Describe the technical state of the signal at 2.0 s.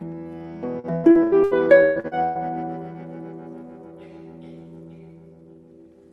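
At 2.0 s the signal is inside a burst of repeated packet loss (robotic sound) running from 0.79 s to 2.38 s. Nine gaps occur over this span, the longest 125 ms, and about 40% of it is concealment rather than received audio. Each hole is filled by extending the last decoded sound before the next dropout arrives, which produces choppy audio with pieces missing. The top end stops near 12 kHz, consistent with the call codec's bandwidth.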